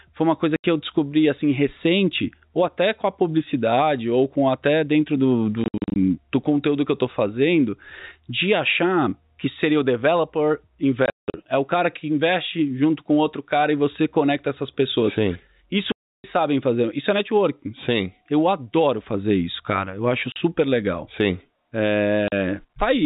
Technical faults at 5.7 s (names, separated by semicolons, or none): packet loss filled with silence